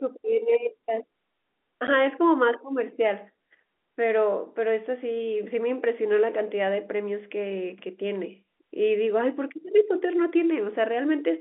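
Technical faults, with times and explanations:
1.87 s, packet loss filled with silence: a sudden 10 ms gap with hard edges, consistent with one lost packet that the receiver replaced with silence.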